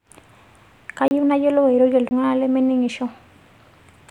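A short hole breaks the speech at 1.08 s for 30 ms, then again at 2.09 s for 20 ms. Both are blocks of digital silence: runs of samples replaced by zeros, cutting in and out without any fade, which fits the output buffer not being filled in time.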